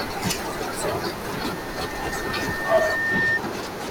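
Loudspeaker feedback squeal, 1.41 to 3.41 s: the microphone-loudspeaker loop exceeds unity gain at 1.8 kHz, so that tone swells over about two seconds, overtopping the speech.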